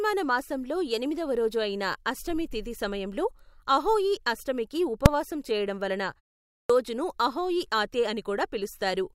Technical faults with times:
5.06 invalid numbers at full scale
6.48-6.70 clipped start after a pause

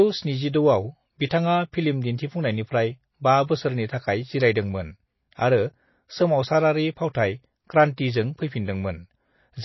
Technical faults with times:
0.00-9.64 MP3 compression
1.26-1.31 pre-echo
7.13 pre-echo

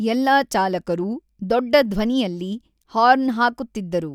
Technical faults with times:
none

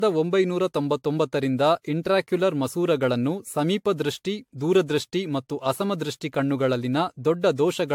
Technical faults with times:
0.00-7.94 generation loss

